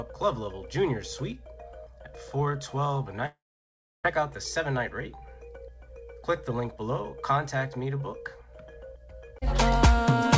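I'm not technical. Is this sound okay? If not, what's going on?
No. At 3.26 s the connection likely stopped delivering audio for about 0.8 s, a long network dropout. The player smears the last sound into a fading buzz, then near silence, and at 4.06 s the sound returns with that stretch missing.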